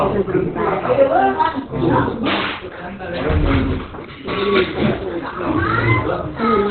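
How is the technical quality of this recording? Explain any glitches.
The technical quality is poor. Throughout the recording there is heavy damage consistent with Opus compression. Nothing is audible above about 4.2 kHz, so the sound is muffled and hoarse. This likely comes from the encoder's narrowband speech mode (SILK) at a very low bitrate, around 12 kbps.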